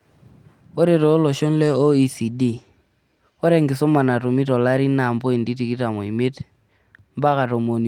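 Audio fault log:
No faults found anywhere in this speech recording.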